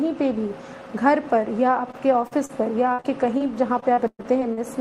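Short concealed packet loss occurs at 1.91 s, 2.27 s and 2.45 s. Each time roughly 20 to 40 ms never arrived, and the receiver extended the preceding sound to bridge the hole, leaving a brief smear or wobble before normal audio resumes.

At 2.93 s a burst of packet loss removes about 60 ms. The receiver continues the last sound while fading it, giving a held buzz or dying hiss. A further short concealed loss follows directly at 3.00 to 3.06 s, and another at 3.38 s.

From 3.80 to 4.59 s, repeated packet loss (robotic sound) sets in: six gaps totalling about 240 ms, the longest about 120 ms, concealing roughly 30 percent of the span. The constant patching makes the sound choppy, with fragments missing.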